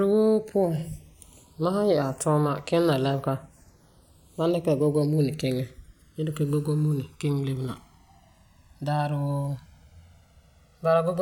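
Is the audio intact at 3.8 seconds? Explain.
No. At 3.8 seconds the speech carries channels drifting apart, a fault present for the whole clip. The two channels run on separate clocks that disagree by roughly 200 parts per million. So the delay between them keeps growing, reaching about one and a half milliseconds by the end. Heard summed to mono, comb-filter notches slide slowly through the spectrum. At this moment that gives a slow, moving flanging colour.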